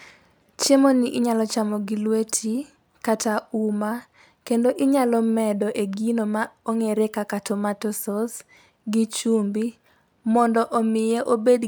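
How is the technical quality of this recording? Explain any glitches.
No technical faults can be heard in this speech recording. There are no glitches to explain.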